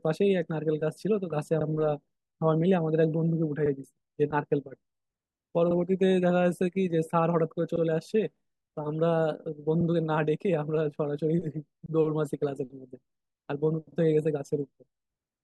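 Speech with overlapping chunks: at 1.61–1.66, 3.66–3.71, 5.71–5.76, 7.76–7.81, 9.81–9.86, 11.86–11.91 and 13.91–13.96 s, a 50 ms sliver plays twice, heard as a regular stutter or click. Each 2.0 s block begins before the previous one has finished, so every join repeats audio. On a waveform, a short duplicated segment with a discontinuity sits at each join. A spectrogram shows thin vertical seams at the same evenly spaced times.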